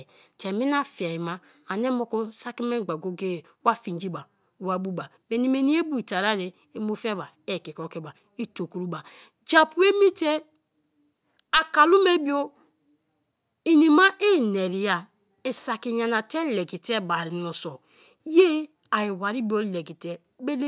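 Nothing stood out as a technical fault on listening to the speech in this clip.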